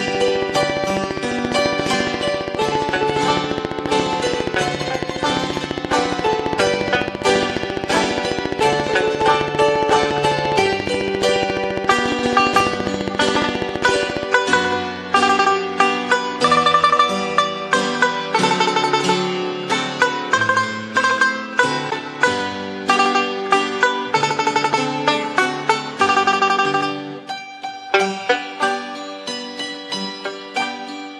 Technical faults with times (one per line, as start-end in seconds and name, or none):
0.08-14.24 train of clicks